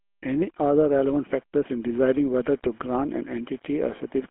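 GSM full-rate codec damage runs through the whole of this speech clip, giving it a plainly audible buzzy, gravelly roughness. The codec models the vocal tract as a filter and excites it with a regular pulse train that keeps only every third excitation sample, so fine detail becomes coarse grit. The rate of damage fits 13 kbps. The band is telephone-narrow, roughly 200 Hz to 3.4 kHz, with nothing above 3.8 kHz.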